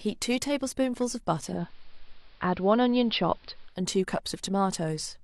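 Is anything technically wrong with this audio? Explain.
Yes, there's one. From 1.42 to 3.83 s you get digital radio blending to analogue: the receiver cross-fades in about 0.21 s to AM, so the speech dulls, picks up faint hiss, then returns.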